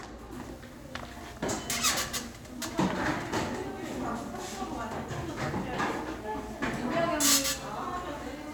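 Video or display buzz runs from 0.31 s to the end of the clip. A screen or its video cable is coupling electrically into the audio path, so the refresh of the picture leaks in as interference. It sounds like a steady buzz at 75 Hz, the display's field rate, with a gritty hash riding above it, sitting somewhere around 25 dB below the wanted sound and present continuously underneath it.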